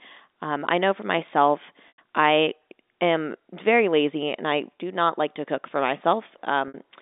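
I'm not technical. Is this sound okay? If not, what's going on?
No. Two short gaps interrupt the speech, at 1.88 to 1.98 s and at 6.68 to 6.74 s. This is packet loss with pitch repetition. Pieces of the signal went missing. The receiver filled each gap by repeating the last tiny slice of sound, then fading it out.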